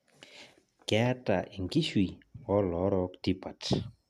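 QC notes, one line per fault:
No faults heard.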